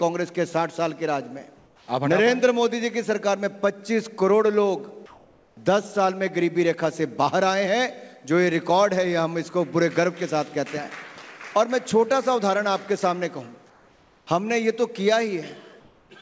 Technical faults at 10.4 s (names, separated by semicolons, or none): none